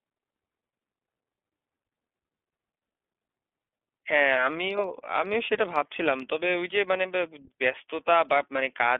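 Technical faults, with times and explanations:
Throughout, iLBC codec: the speech is confined to a telephone band of 250 Hz to 3.4 kHz and has a plainly audible rough, slightly synthetic edge, since each frame's excitation is coded on its own, which fits 30 ms frames at 13.33 kbps.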